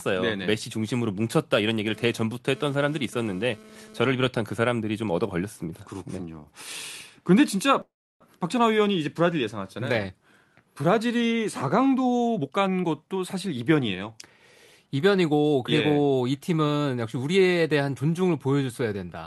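From 1.91 to 4.08 s a GSM phone buzz cuts in: a nearby 2G handset's radio bursts, rectified by the audio circuitry, give a harsh 217 Hz rasp about 22 dB below the speech that comes and goes with data traffic. A spectrogram shows a comb of evenly spaced harmonic lines on 217 Hz, switching on and off.

At 7.81 s the sound stops for about 0.4 s in a call audio freeze, likely from delayed packets draining the jitter buffer. The last sound is drawn out briefly, then 330 ms of silence follows before the speech resumes intact at 8.23 s. The waveform shows a flat gap, not a splice.

Between 12.38 and 14.27 s a jitter buffer speed-up trims roughly 0.4 s of excess buffered audio by cutting out short pitch-period slices. Speech runs about 20 percent faster at unchanged pitch and sounds hurried. Syllables look compressed in time while the harmonic spacing stays put. Throughout the clip the spectrum stops at 12 kHz, the bandwidth limit of the call codec.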